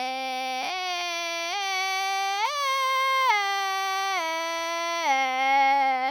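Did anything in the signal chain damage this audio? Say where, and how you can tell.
No, nothing in this music stood out on listening as damage from any stage of the signal chain.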